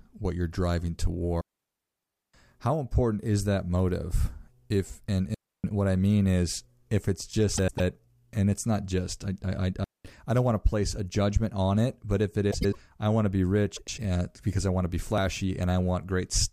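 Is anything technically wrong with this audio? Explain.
Yes, this speech has three kinds of fault.

A digital wireless dropout occurs at 1.41–2.34 s (about 0.93 s), 5.34–5.64 s (0.30 s) and 9.84–10.05 s (0.21 s). The receiver mutes cleanly after losing data, leaving flat near-silent gaps in the waveform and blank columns on the spectrogram, with no noise at either edge.

Frames out of order occur at 7.57–7.80 s, between "mean is if it's" and "and it's not just"; at 12.51–12.76 s, between "it but if it" and "I want to be"; and at 13.76–13.99 s. In each, two adjacent blocks of about 105 ms play swapped. This produces a garbled flutter, seen as vertical spectrogram lines at the discontinuities.

Processor overload crackle occurs at 15.02–15.18 s, just after "I want to be". A run of missed deadlines, fitting roughly 10 ms buffers skipped several times, gives gritty tearing, seen as a cluster of hard-edged waveform breaks and broadband spectrogram streaks.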